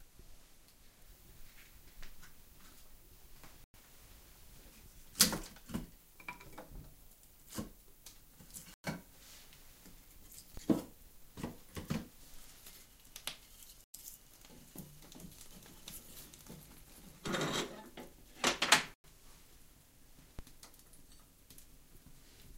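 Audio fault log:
3.64–3.74, 8.74–8.84, 13.84–13.94 and 19.04 s (from 18.94 s), gap between chunks: the sound stops dead for 100 ms at each of these points, then resumes exactly where it left off. The holes arrive after every 5 s of audio, so the stream was cut into 5-second pieces. Unlike a dropout, nothing is missing. The edges are hard cuts, and the interruption repeats on a fixed clock regardless of what the sound is doing.
10.57 and 20.39 s, DC step: at each moment the waveform's zero line jumps to a new offset, and a 20 Hz high-pass then pulls it back toward centre. What reaches the ear is a low thump or click, a brief surge of sub-bass energy that settles as the offset decays. Unlike a chunk gap, the sound carries on uninterrupted through it, and the two events are irregular rather than periodic.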